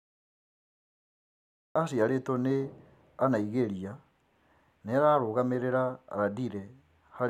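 From 0 to 1.76 s there is only digital silence. At 1.76 s the speech starts abruptly, mid-sound, just before "aciarĩtwo nĩ". This is a cut-off start. Capture began late, so the opening has no natural attack or fade-in.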